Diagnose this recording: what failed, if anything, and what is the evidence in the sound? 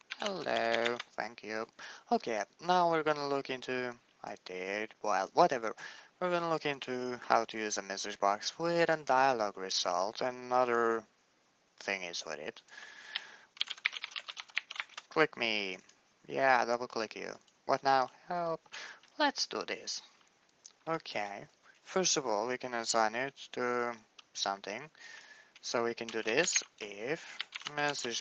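Nothing in this recording has failed. The audio carries the marks of a call path working as designed, with the top end stopping near 8 kHz and the usual coding texture that fits an Opus stream at around 20 kbps.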